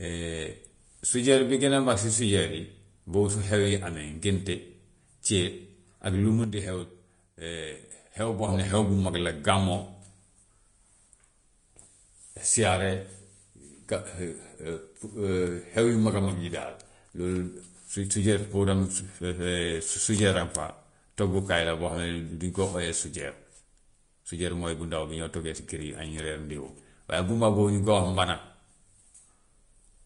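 Speech runs the whole 30 seconds with plainly audible coding damage, likely from Vorbis compression at a low setting. The treble sounds hissy and grainy, consonant attacks are smeared, and nothing is left above 10.5 kHz. That degree of damage fits a bitrate somewhere around 36 kbps. On a spectrogram the energy stops at a hard horizontal ceiling at 10.5 kHz, and the upper band beneath it looks speckled and noisy instead of showing clean harmonic detail. A sudden gain jump starts at 6.44 s, right after "ak lu". The level drops by about 6 dB in a single step with no fade, probably from a gain setting applied without a ramp. The background noise falls with the speech, and the level jumps back up at 8.48 s, just before "xam ne xew bu". On the waveform the envelope shows a rectangular notch of roughly half amplitude with vertical edges at both times.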